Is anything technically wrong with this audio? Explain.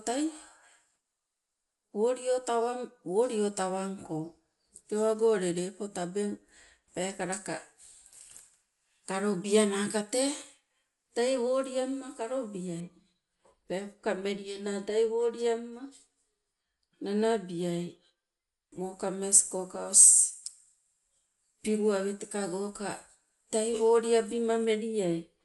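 Yes. Throughout the speech, likely Dolby Digital compression, at a rate fitting about 64 kbps, starves frequency lines of bits and removes everything above 11.5 kHz, leaving it dull and rough.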